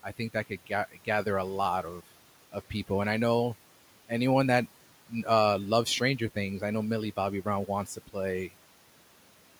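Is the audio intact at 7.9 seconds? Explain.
No. From 7.86 to 8.15 s the noise suppressor cuts into the speech, misreading quiet speech energy as background and pulling it down by up to about 10 dB, so around a tenth of a second sounds swallowed and faint against room noise about 23 dB below speech.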